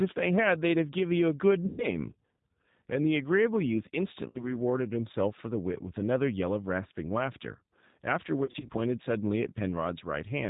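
The whole clip of speech runs through the G.729 codec, in its G.729A form at 8 kbit/s. The damage is plainly audible. Nothing above 4 kHz survives, so the sound is narrow and muffled. Each 10 ms frame is rebuilt from a vocal tract filter, a pitch predictor and a few pulses. That model leaves the speech intelligible but rough and faintly synthetic.

VoIP packet loss concealed by the speech codec first appears from 1.66 to 1.87 s. About 120 ms of audio is missing, which fits four lost packets. The decoder repeats its last pitch and filter and lowers the gain each frame. The speech smears into a fading buzzy tone or coloured noise. From 4.29 to 4.57 s, about 60 ms is lost, likely two packets. The speech stays weak after it returns, because each frame builds on the last. From 8.45 to 8.70 s, about 120 ms is lost in short gaps spread over 240 ms. The longest gap is 30 ms.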